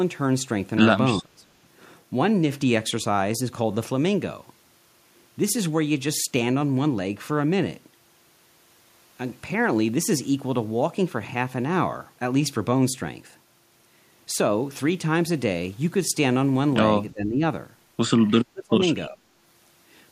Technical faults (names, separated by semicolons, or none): speech suppressed in double talk